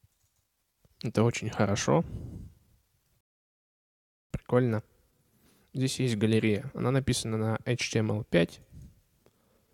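At 3.21 s the player runs out of downloaded audio and halts until more data arrives, a rebuffering stall. Playback stops dead and the sound drops to silence, holding there until 4.31 s, when it picks up at exactly the point where it broke off. None of the material is skipped or repeated; the stall simply inserts about 1.1 s of dead air, stretching the running time by that amount.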